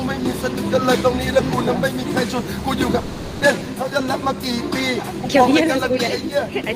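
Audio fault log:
2.99–3.43 s, long network dropout: the audio freezes into a buzzy, smeared continuation of the last sound that thins out over about 0.42 s without ever falling to true silence, then jumps ahead with a skip in continuity. The likely cause is a gap in arriving packets: the receiver filled the missing stretch by extending and fading what it last had, and when delivery resumed, that lost portion was simply gone rather than delayed.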